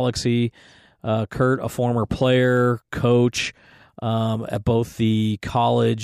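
A short speech recording, with no technical fault to be heard anywhere in it. Nothing audible points to a problem in how it was captured, processed or delivered.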